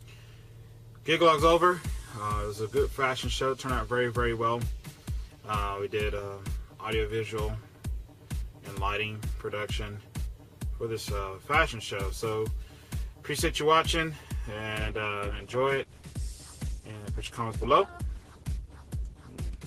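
At 14.78 s the audio suddenly turns duller and more processed, with nothing left above about 12.1 kHz, and it stays that way to the end at 19.66 s, with no gap at the change. This is an adaptive stream at a lower bitrate: when the connection slowed, playback switched to a cheaper version of the same stream, which points to Opus dropping from around 64 to 16 kbit/s, so codec artefacts rise and the treble goes.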